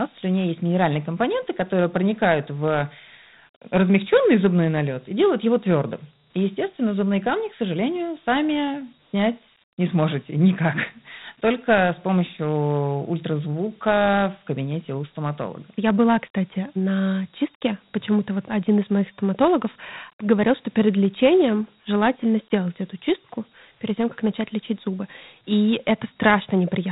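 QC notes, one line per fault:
Throughout: Dialogic VOX ADPCM. Plainly audible grit and hiss ride on the speech, rising and falling with it. Each sample is coded as a coarse 4-bit step. Nothing sounds above 3.8 kHz, which fits a 32 kbps, 8,000-samples-a-second stream.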